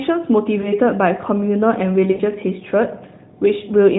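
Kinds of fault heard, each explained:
lost AMR speech frames: A brief dip and warble at 0.62 s, then at 2.12 s a longer smear where the sound drags, sags and returns rough. Corrupted frames made the decoder repeat its last good settings at falling gain; the second gap fits about four frames.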